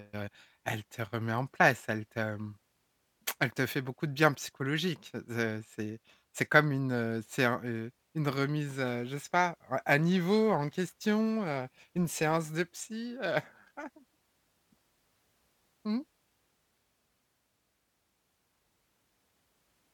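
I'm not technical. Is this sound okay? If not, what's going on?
No. From 10.02 to 14.09 s, just after "sais pas à à", the speech takes on a rough, metallic edge. This is periodic clock jitter: the timing clock that turns the sound into digital form wobbles steadily, here around 1 kHz, so every part of the voice gets ghost tones just above and below it. Unlike a hum or hiss, it disappears in the pauses, because it only colours sound that is already there.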